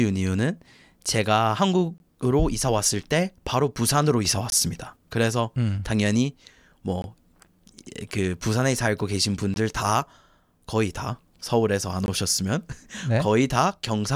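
Short, hard-edged holes of silence, each 20 ms, interrupt the speech at 1.98–2.00, 4.50–4.52, 7.02–7.04, 9.54–9.56 and 12.06–12.08 s. This is a gap between chunks: each 2.5 s chunk is followed by inserted silence.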